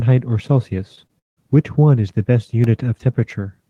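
At 0.95 to 0.99 s and again at 1.07 to 1.11 s there is short concealed packet loss: roughly 20 ms of audio arrived too late, and the receiver patched each gap by extending the preceding sound. Each is heard as a quick smear, and on a spectrogram the patched stretch looks smoothed over for a moment before rejoining the real signal.

From 1.19 to 1.39 s the sound continues as a fading buzz or hiss and then drops to near silence, which points to a likely long network dropout that cost about 0.18 s of audio. The waveform shows the envelope decaying into a flat line, and the spectrogram shows dark emptiness until the sound resumes.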